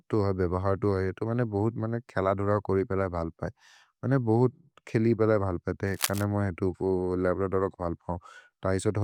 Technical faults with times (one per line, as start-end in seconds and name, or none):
5.87-6.25 cable scratch noise